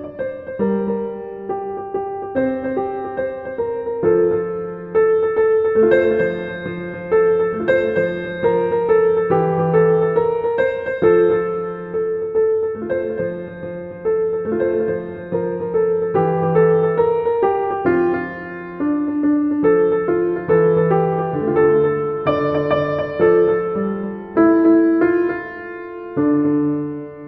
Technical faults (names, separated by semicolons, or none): doubled audio track